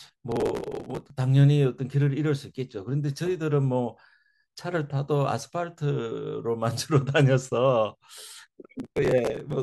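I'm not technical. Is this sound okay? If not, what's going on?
No. The speech has processor overload crackle twice, from 0.32 to 1.10 s and again from 8.79 to 9.53 s. The computer was too busy to deliver each tiny slice of sound on time, slices lasting roughly a millisecond and a half. Dozens were dropped over a short stretch, leaving hard-edged gaps that blur into a gritty tearing. Unlike a single click or one dropout, it is a sustained rough stretch that stops cleanly once the load eases.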